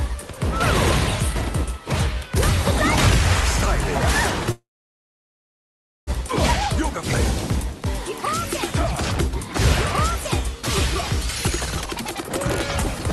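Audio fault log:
4.51 to 6.10 s, call audio freeze: the sound stalls for about 1.6 s. A brief fading buzz carries the last sound, then roughly 1.4 s of near-silence, and it picks up right where it left off. Nothing's lost, just a gap, likely from packets held up until the jitter buffer ran dry.
11.47 to 13.09 s, jitter buffer speed-up: playback runs about 27% fast with the pitch unchanged, so things feel hurried. The buffer had built up extra delay, and the receiver trimmed it by cutting tiny pitch-period slices over and over, roughly half a second in all.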